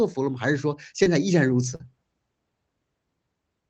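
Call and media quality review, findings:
Short concealed packet loss at 1.03–1.08 s and 1.76–1.81 s. Brief smear and wobble in the speech. The jitter buffer's loss concealment extended the previous sound over gaps of about 20 and 40 ms.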